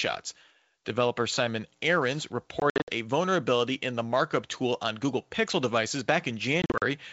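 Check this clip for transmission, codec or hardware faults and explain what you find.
There's one kind of fault here, packet loss on an ADPCM call, occurring twice over a clean G.722 wideband link. At 2.60–2.90 s, just before "a vulnerability in the", about 160 ms drops out in bursts up to 60 ms. At 6.62–6.83 s, 120 ms goes in runs up to 40 ms. Each gap is hard silence, and the decoder's predictor and step size lose sync, so speech returns slightly distorted before settling.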